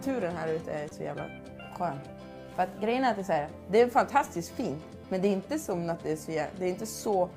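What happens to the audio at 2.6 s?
Nothing goes wrong at 2.6 s; the audio runs straight through that moment with no dropout, click or other fault.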